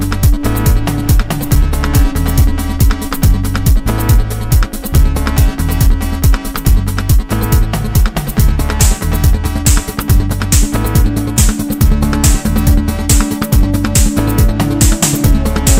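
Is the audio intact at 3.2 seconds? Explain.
No. Hard clipping runs through the whole clip, including 3.2 s. Peaks exceed the limit by about 3 dB and are cut flat, causing crackle on loud moments.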